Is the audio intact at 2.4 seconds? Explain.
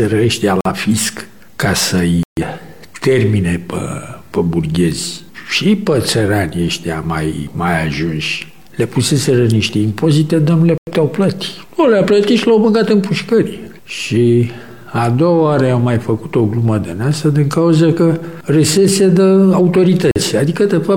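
No. From 2.23 to 2.42 s the sound drops abruptly into silence for about 0.18 s, then carries on with timing intact. This is a corrupt frame muted: the decoder rejected damaged compressed frames, roughly four by the gap's length, and the player filled their place with silence.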